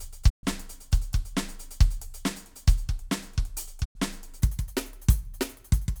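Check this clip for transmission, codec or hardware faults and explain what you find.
Two faults are audible in this music: digital broadcast dropouts and a closing section at the wrong speed.

Digital broadcast dropout, at 0.28 to 0.45 s and 3.84 to 3.97 s: the receiver lost valid frames and muted, fading out over about 20 ms. The music vanishes briefly, consistent with roughly four and three lost frames, and that material never returns.

Section at the wrong speed, from 4.39 s to the end: this is likely a playback clock mismatch, running the audio 1.38 times too fast. Tempo rushes and pitch rises together, by about five semitones.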